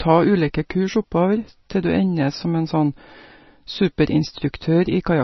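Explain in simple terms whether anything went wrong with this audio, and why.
The speech sounds dull and watery from start to finish. Nothing is heard above 5.9 kHz. Heavy MP3 compression likely stripped the treble and blurred detail.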